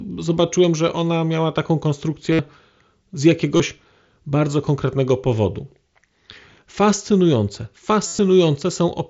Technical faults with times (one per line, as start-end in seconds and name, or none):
2.32-2.39 concealed Bluetooth headset packet loss
3.57-3.60 concealed Bluetooth headset packet loss
8.07-8.19 concealed Bluetooth headset packet loss